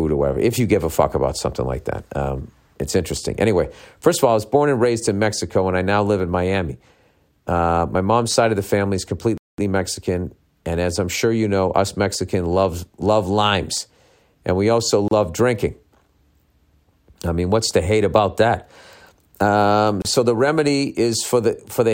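At 9.38 s, just after "of the family is", the speech stops dead. Silence holds until 9.58 s, about 208 ms. Then the speech resumes from where it broke off. This is a playback stall. The player likely ran short of data, or its thread was briefly blocked, so nothing reached the output until it caught up.

Two shorter breaks follow, each a gap at a join of encoded pieces. The first runs from 15.08 to 15.11 s, about 32 ms, right after "limes and we also". The second runs from 20.02 to 20.05 s, about 30 ms, just before "so the remedy". Each marks a point where separately encoded segments were joined untrimmed. The encoder's start-up delay and end padding stayed in as silence. The codec smears the edges of each gap. Speech continues from where it stopped.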